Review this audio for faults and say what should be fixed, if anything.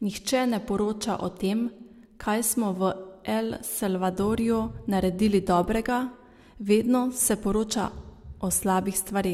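Nothing needs fixing; no faults can be heard.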